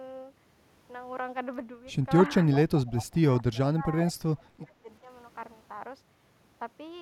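It's a speech clip from what sounds like a speakerphone call, with two related problems. There's an echo leak at 2.51–2.59 s, 2.78–3.15 s, 3.54–3.59 s and 4.08–4.13 s: a faint copy of the near talker arriving about 386 ms late and sitting roughly 15 to 25 dB under the speech, likely because the far end's echo canceller didn't fully remove its loudspeaker pickup. There's also speech suppressed in double talk at 2.69–2.87 s, 3.72–3.94 s and 4.21–5.08 s. The talker dips by somewhere around 10 to 20 dB, deepest in the last stretch, where about half a second is pulled down. That's likely the canceller ducking everything while both sides overlap.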